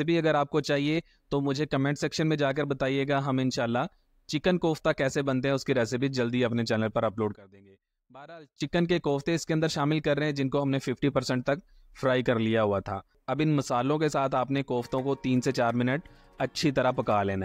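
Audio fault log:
7.36 to 8.61 s, one channel inverted: for this stretch one side of the stereo pair has likely flipped polarity, so when the two channels are summed to mono, everything they share cancels. The level falls by about 23 dB and centred material and low end nearly disappear, leaving only the faint residue of whatever differed between left and right. Full level and body return abruptly at 8.61 s.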